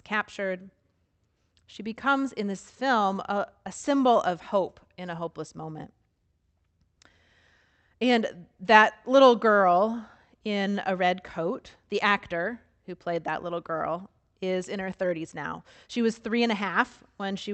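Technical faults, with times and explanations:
No technical faults can be heard in this speech clip, so there are no times or explanations to give.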